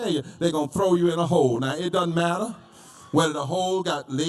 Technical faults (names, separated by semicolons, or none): channel delay (comb filtering)